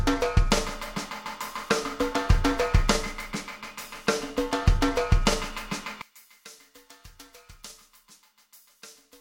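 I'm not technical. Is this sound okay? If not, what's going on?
No. From about 6.02 s to the end at 9.21 s, the sound suddenly becomes much quieter, with the centre nearly gone. The likely cause is one channel inverted: one side of the stereo pair is flipped upside down, so when the two sides are combined, everything they share cancels out. Unlike a dropout or a simple volume drop, it doesn't go silent or just get softer; a faint remnant stays.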